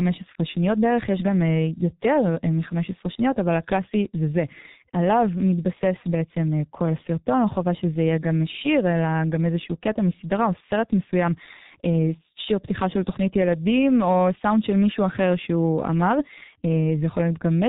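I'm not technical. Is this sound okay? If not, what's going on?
No. The speech sounds muffled and hoarse from start to finish because it went through the G.723.1 codec, an early internet-phone format that squeezes audio hard. It drops everything above 4 kHz, so crisp sounds like s and t blur together.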